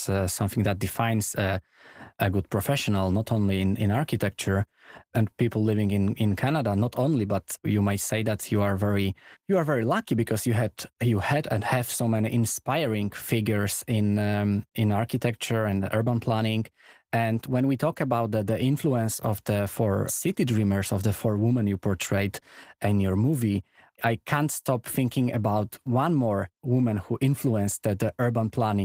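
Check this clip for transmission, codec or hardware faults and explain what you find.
No transmission, codec or hardware faults turn up anywhere in this speech clip. The Opus voice compression can be heard running in its hybrid mode at about 20 kbps with fullband audio, leaving only light coding traces on the speech.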